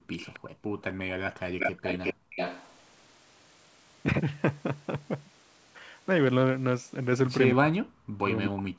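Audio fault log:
0.00–1.83 s and 2.14–2.36 s, background gated by the echo canceller: the room sound drops away by as much as about 40 dB, for roughly a second in total in the first span and a brief moment in the second. The canceller pulled the microphone down hard while the loudspeaker was playing, and released it afterwards.
0.19–0.39 s, 1.59–2.78 s and 8.56–8.62 s, echo leak: a delayed copy of the speech follows the original, faint and short at first, then strong and sustained from 1.59 s, then a brief scrap at 8.56 s. The delays are 265 ms and 369 ms. This is likely far-end loudspeaker sound that the echo canceller failed to remove and that was sent back.
4.97 s, dropped buffer (overrun): a small forward jump in the sound and no gap of silence, where a few milliseconds of audio go missing. The likely cause is a capture buffer that was overwritten before it was read, with the two edges spliced directly together.
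7.51–8.78 s, speech suppressed in double talk: the talker's speech dips, with reductions around 40 dB, through to the end of the clip. The likely cause is both sides talking at once, with the echo canceller unable to separate them and attenuating everything.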